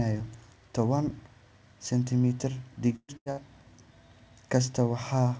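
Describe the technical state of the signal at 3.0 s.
A burst of packet loss runs from 2.96 to 3.11 s. The receiver stretches the last sound, fades it to silence, then resumes with about 120 ms missing.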